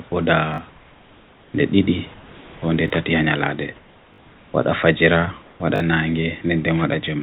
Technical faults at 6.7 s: none

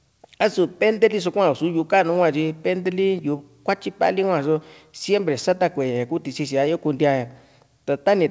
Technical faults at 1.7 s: none

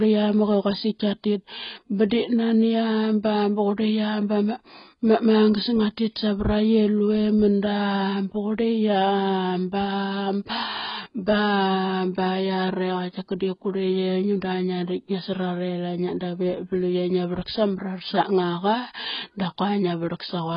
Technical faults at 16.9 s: AAC compression

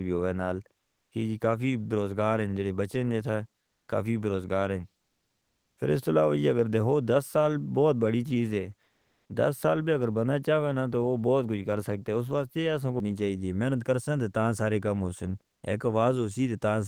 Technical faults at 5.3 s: comfort noise in place of the background

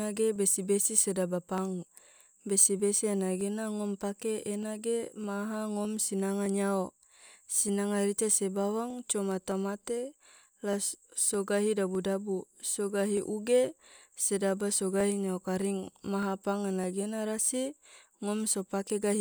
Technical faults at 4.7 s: clock drift buffer slips

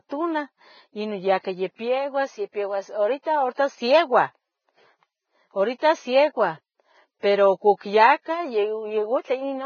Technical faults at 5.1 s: Vorbis compression

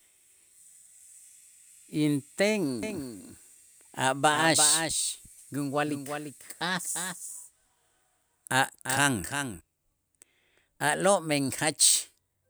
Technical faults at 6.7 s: doubled audio track

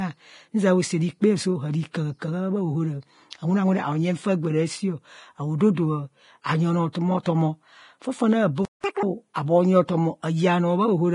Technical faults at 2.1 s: Vorbis compression

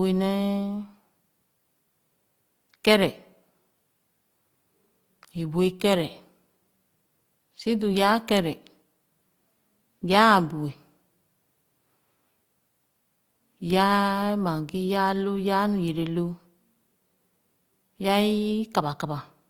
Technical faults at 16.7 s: Opus compression

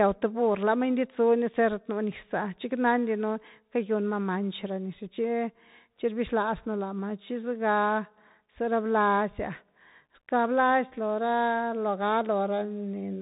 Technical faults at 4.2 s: Bluetooth CVSD headset codec

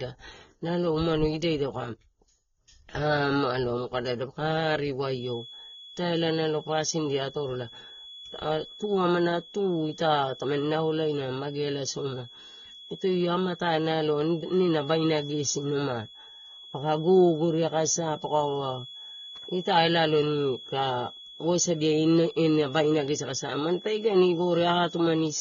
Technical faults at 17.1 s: AAC compression; feedback whistle

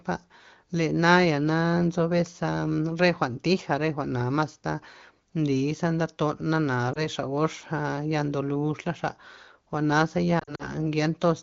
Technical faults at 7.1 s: lost AMR speech frames

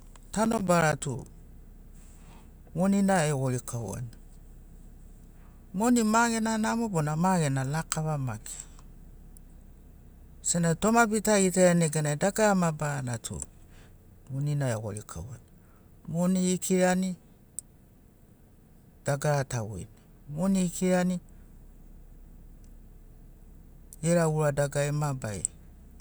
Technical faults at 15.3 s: none

